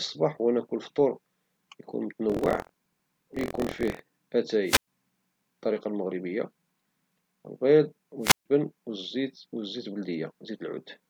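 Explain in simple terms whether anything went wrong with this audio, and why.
Two things went wrong in this speech. From 2.28 to 4.01 s there is buffer tearing: a steady robotic buzz at about 43 Hz, where small slices of slightly older sound keep cutting in. At 4.65 s and 8.21 s there are wireless microphone squelch dropouts: hiss rises, then the sound goes silent for about 0.11 s and 0.14 s. Unlike the buzz, these are brief gaps.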